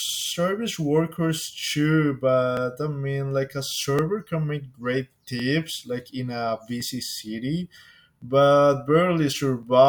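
A click recurs through the speech every 1.41 s, from 1.16 s to 9.63 s. These are likely clock drift buffer slips: two devices' clocks disagree by about 700 ppm, so every so often a block of several dozen samples is dropped or repeated.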